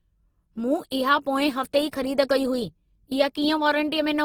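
Throughout, the speech has Opus compression: grainy, rough noise filling bands, likely from a low rate near 16 kbps. A spectrogram shows noisy, hole-free bands ending near 20.2 kHz.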